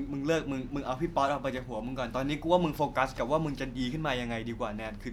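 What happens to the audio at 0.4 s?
Nothing goes wrong at 0.4 s; the speech there plays through intact, with no dropout, click or distortion.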